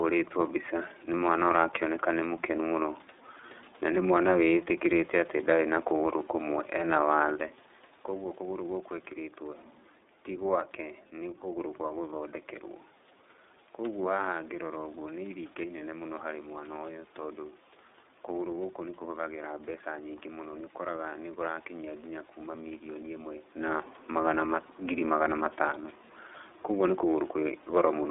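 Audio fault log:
throughout iLBC codec: speech is held to a telephone band of 300 Hz to 3.7 kHz, with a plainly audible rough, synthetic grain because each 30 ms frame's excitation is coded on its own. A simple band-limiting filter would not add that grain. The sound fits the 13.33 kbps mode.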